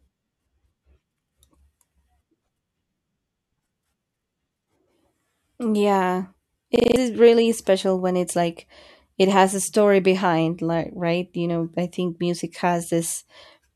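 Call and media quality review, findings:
System hang loop, 6.76–6.96 s: one 40 ms slice of speech repeats exactly five times, a 25 Hz stutter-buzz. Driver stalled while the device replayed its ring buffer, fitting a 40 ms buffer. Identical repeats, no fade, unlike concealment.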